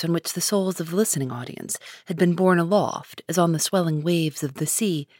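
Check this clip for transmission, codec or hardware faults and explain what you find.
Nothing in the speech stood out as a fault on listening.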